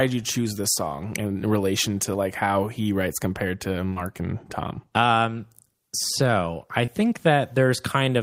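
At 3.89 s the speech hits two back-to-back short concealed packet losses, running to 3.93 s and then on to 3.98 s, so about 40 ms of audio was never received and had to be synthesised. The decoder stretched the preceding sound forward, repeating its pitch period or shaping noise, then crossfaded into the returning signal. It is heard as a brief smeared wobble. A third loss at 6.86 to 6.90 s gives a shorter smear.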